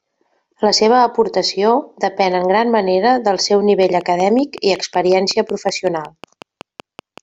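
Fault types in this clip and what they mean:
Train of clicks: from 3.83 s to 7.19 s, right after "gran manera del seu", about twenty similar clicks tick over the speech at a regular 5.4 per second, peaking about 5 dB above it, likely from interference or a faulty connection injecting repeated pulses.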